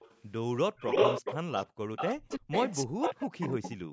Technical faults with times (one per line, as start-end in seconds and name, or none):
0.00-0.22 echo leak
0.76-2.37 echo leak
1.68-1.79 background gated by the echo canceller
2.13-3.92 speech suppressed in double talk
2.69-3.92 echo leak